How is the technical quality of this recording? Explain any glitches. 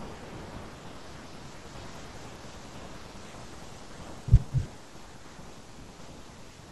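There's one clear glitch in the speech. From 3.22 to 4.84 s the playback speeds up by about 6.3% and the pitch rises about 106 cents, roughly a semitone, then snaps back to normal. That sounds like a drift correction step: software matching two clocks likely jumped the rate in one go to refill or drain its buffer instead of nudging it gradually. You hear it as a brief, sudden sharpening and quickening of the voice.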